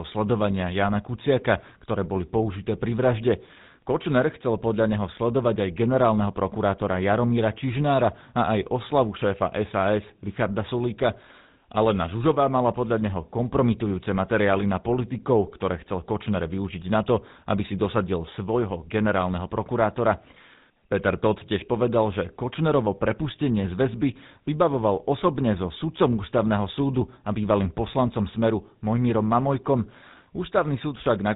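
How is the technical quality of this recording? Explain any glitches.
The quality is poor because of one fault that lasts the whole clip. Throughout, a GSM full-rate codec rebuilds the speech from a vocal-tract model driven by sparse regular pulses and cuts everything above 3.8 kHz. The speech comes out plainly buzzy, gravelly and dull.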